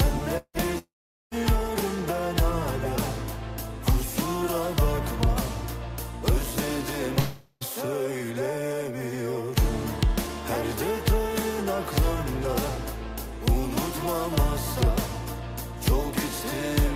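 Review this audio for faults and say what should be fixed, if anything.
Long network dropouts at 0.37 to 0.57 s, 0.78 to 1.34 s and 7.19 to 7.64 s: the sound is replaced by a buzzy continuation of what came before, fading into silence for about 70 ms, 440 ms and 40 ms, and then resumes with a skip, so roughly 0.18 s, 0.54 s and 0.42 s of material are gone. This is likely a stream that stopped arriving while the receiver stretched its last audio to cover the gap. A larger jitter buffer, redundancy or forward error correction, and a more stable connection would prevent it.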